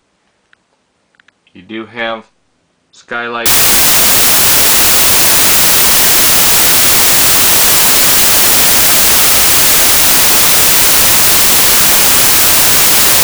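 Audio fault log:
3.46 s to the end: samples built from the wrong bytes. Right at that point the clean sound gives way to a loud, harsh broadband noise that lasts until the clip stops. It sounds like the reader slipped out of step with the sample boundaries, so every value gets assembled from mismatched bytes and the jittery low bits end up in charge.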